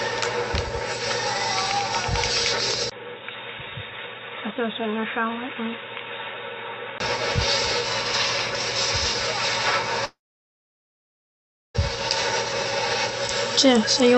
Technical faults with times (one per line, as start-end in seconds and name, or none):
2.90-7.00 input switched to a poorer device
10.05-11.76 long network dropout